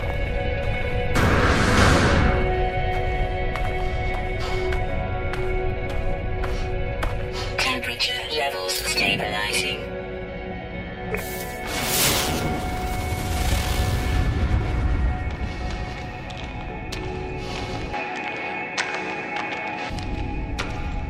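From 17.94 to 19.90 s the sound goes duller, capped near 8.6 kHz, a few dB different in level with a faint new hiss, likely the input switching to a poorer device.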